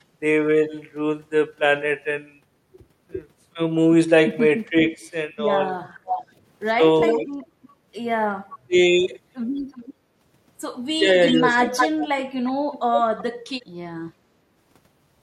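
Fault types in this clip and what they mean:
Speech suppressed in double talk: likely the echo canceller mistook overlapping talk for echo and ducked it, so speech dips briefly, by up to about 30 dB.
Echo leak: likely a far-end loudspeaker echo slipping past cancellation, returning a delayed copy of the speech roughly 0.36 to 0.38 s later, sometimes faint, sometimes nearly as loud.
Background gated by the echo canceller: the canceller clamped the microphone while the loudspeaker played, so room sound dips about 7 dB for a fraction of a second.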